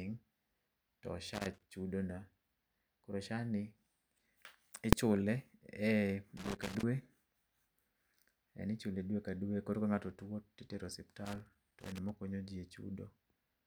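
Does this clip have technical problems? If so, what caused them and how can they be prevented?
Yes. Three irregular bursts of scratchy crackle break into the speech, from 1.34 to 1.72 s, from 6.37 to 6.83 s, and from 11.25 to 12.10 s, the last one just after "tuo titero". This is loose connector crackle: a worn or dirty contact in a cable or jack makes and breaks as it shifts, chopping the signal on and off, while any DC on the line adds pops. To prevent it, clean or replace the suspect plug, socket or cable and secure it so it cannot move during recording.

At 4.93 s a single sharp bang cuts through, far louder than anything around it. This comes from invalid numbers at full scale: a processing calculation produced infinite or undefined values, which the output rendered as the largest possible sample value for one short stretch of about 1.45 ms, which fits a 64-sample block. Because the block is so brief, the jump to full scale and back merges into one loud click. 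To prevent it, guard the processing code against division by zero and unstable filters, and replace any invalid values with silence before output.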